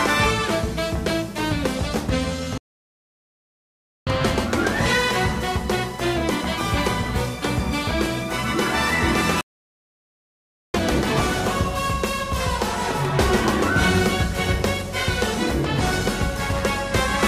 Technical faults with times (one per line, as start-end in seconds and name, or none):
2.58-4.07 playback stall
9.41-10.74 playback stall